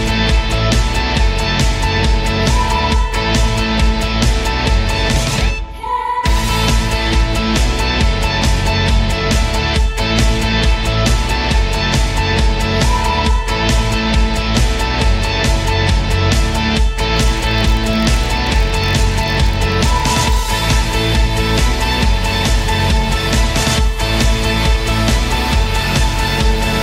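A buzz at about 43 Hz runs from 17.14 to 20.59 s, a block size mismatch (padded): short blocks are zero-filled, which fits 1024-sample reads.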